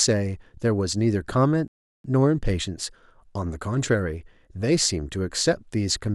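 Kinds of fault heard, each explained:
Rebuffering stall: the player exhausted its downloaded audio, so the speech drops to silence from 1.68 to 2.04 s, then resumes intact, adding about 0.36 s.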